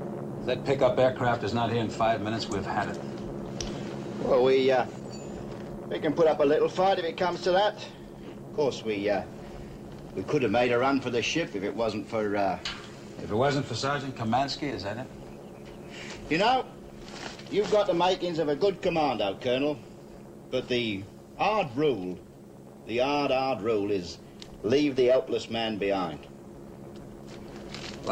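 No technical faults can be heard anywhere in the audio, and the signal stays intact and continuous throughout.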